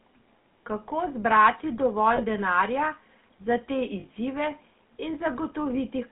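Right from the start the whole clip carries that buzzy, gravelly GSM full-rate codec sound, which fits the 13 kbps full-rate coder. It rebuilds speech from a vocal-tract model fed by coarse pulse excitation, so the texture turns rough. The line band runs roughly 150 Hz to 3.4 kHz, and the damage is plainly audible.

Then there are three spots of lost GSM frames, where the decoder just repeats the last good frame, leaving a brief metallic ring. The first is at 0.42 s. The second runs 2.16 to 2.22 s, between "zbrati dovolj" and "denarja za te". The third, at 4.00 to 4.05 s right after "dovolj denarja za te", is where two 20 ms frames went missing.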